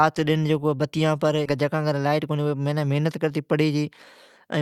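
Just after "بتی بر", at 1.45 s, the speech jumps abruptly forward with no gap. This is a skip ahead: around 0.4 s of audio was thrown away while later audio was already queued, so the two sides of the cut are spliced almost directly.

From 2.05 to 2.55 s the speech sounds hurried but keeps its pitch, running at about 110% speed. This is a jitter buffer speed-up: the receiver trimmed many short pitch-period slices, around 50 ms in total, to shrink an overfilled buffer.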